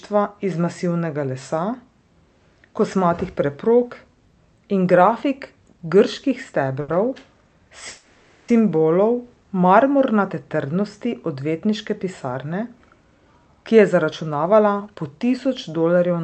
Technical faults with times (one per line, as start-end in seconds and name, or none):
6.81-6.90 short stall from a late packet
7.88-8.50 call audio freeze
13.18-14.96 jitter buffer speed-up